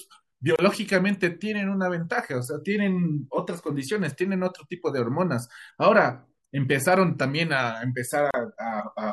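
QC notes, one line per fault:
0.56–0.59 s and 8.31–8.34 s: gap at a join of encoded pieces. Untrimmed encoder delay and end padding leave 29 and 33 ms silences, visible as flat waveform dropouts and thin blank spectrogram columns with smeared edges.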